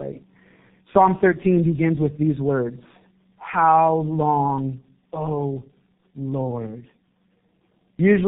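Throughout, the speech passed through tandem speech coding: G.729A at 8 kbit/s, then G.711 A-law, then G.723.1 at 6.3 kbit/s, so the second low-rate coder re-encoded the first one's damage. The result sounds rough, muffled and warbly, with nothing above 3.8 kHz.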